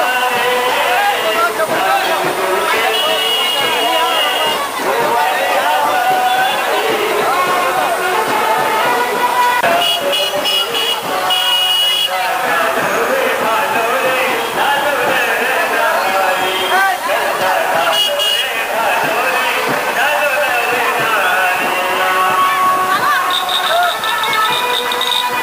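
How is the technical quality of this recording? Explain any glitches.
The recording is marred by heavy, constant hiss caused by low bit depth with dither, present from start to finish. The signal was stored with only 5 bits per sample. Before each sample was rounded to one of so few levels, random dither noise was added, which turns what would be harsh, signal-following quantisation distortion into steady white noise. That noise sits only roughly 15 dB below the sound itself, so an even, broadband hiss lies over the whole clip with no crunchy distortion.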